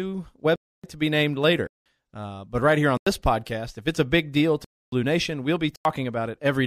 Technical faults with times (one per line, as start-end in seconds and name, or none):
0.56-0.84 block of digital silence
1.67-1.86 block of digital silence
2.97-3.06 block of digital silence
4.64-4.92 block of digital silence
5.76-5.85 block of digital silence